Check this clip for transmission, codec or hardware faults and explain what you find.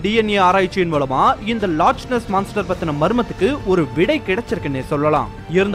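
Nothing faulty turns up anywhere in this recording.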